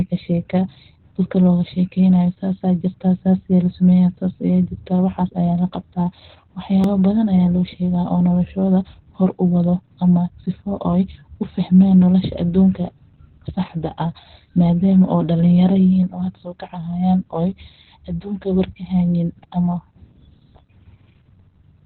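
This is a speech clip carrying Opus voice compression from start to finish. Nothing is heard above about 4.4 kHz, so the voice is narrowband and muffled. The codec is running its SILK linear-prediction coder and describing the excitation only roughly. That makes the speech hoarse and a little robotic. The damage is heavy, which points to a very low rate of around 8 kbps. At 6.84 s there is a block of digital silence about 1.2 ms long. The sound cuts out and comes back with no fade. Because the hole is so short, it is heard as a single click rather than a gap. The likely cause is an output buffer that was not filled in time.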